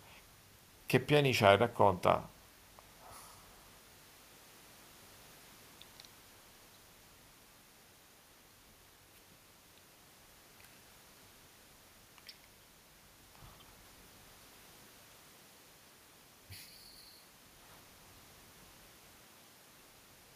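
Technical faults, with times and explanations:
Nothing stood out as a technical fault on listening to this speech recording.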